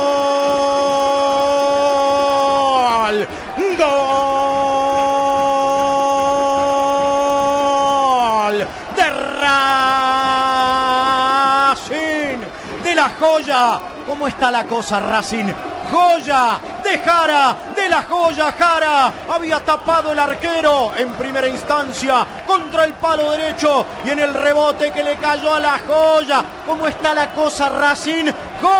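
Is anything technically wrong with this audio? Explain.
Yes. Resampler restarted on every block, throughout: each 100 ms block was converted from 24 kHz to 48 kHz separately, leaving edge errors heard as steady 10 Hz ticks whenever sound plays.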